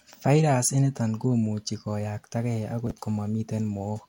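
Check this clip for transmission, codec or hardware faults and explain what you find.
One fault is present. From 2.87 to 2.91 s there are chunks out of order. A 10 ms chunk plays three chunks late. The hard joins make a brief garbled moment.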